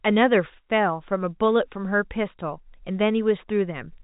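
No technical faults can be heard in this speech recording. It has the narrow band of G.711 telephone coding, with nothing above about 3.8 kHz, which fits a 64 kbps mu-law line.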